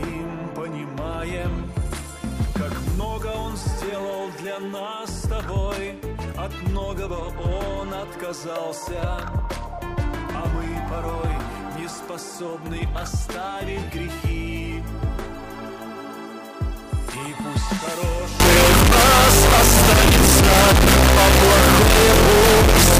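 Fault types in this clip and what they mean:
Float read as integer: from 18.4 s to the end, the sound turns abruptly into a loud, harsh, near-square wave at an almost fixed, high level, with background noise as loud as everything else. The likely cause is 32-bit float samples read as 32-bit integers. Unlike ordinary clipping, even quiet passages become this loud.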